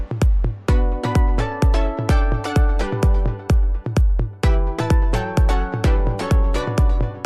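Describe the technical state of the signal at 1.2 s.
At 1.2 s the signal is intact, with no dropout, distortion or other fault audible at that moment.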